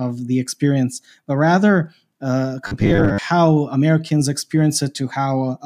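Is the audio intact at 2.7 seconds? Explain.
No. Just after "experience but rather uh", from 2.67 to 3.18 s, the speech turns into a rigid, metallic buzz at 100 Hz: robotic sound from repeated short buffers. Likely cause: audio arriving too seldom, so roughly half is filled by repeating a 10 ms slice.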